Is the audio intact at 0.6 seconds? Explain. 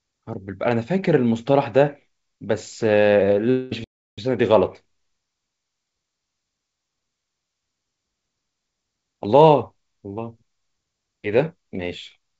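Yes, the audio is intact at 0.6 seconds, with nothing there beyond the ordinary sound of the call path, whose codec leaves nothing above 8 kHz.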